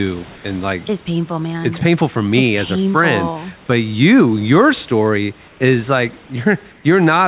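Comfort noise in place of the background occurs at 0.36–0.44 s (before "and like it's painful"), 5.48–5.6 s (after "your story") and 6.72–6.84 s (after "your story is like"). In each pause the room background becomes a flat hiss about 2 dB quieter, likely because the sender stopped transmitting during silence and the receiver synthesised filler noise.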